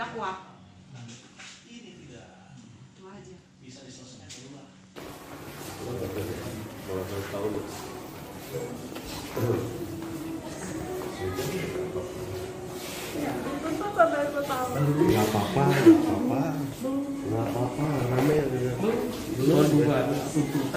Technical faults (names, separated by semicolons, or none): DAB burbling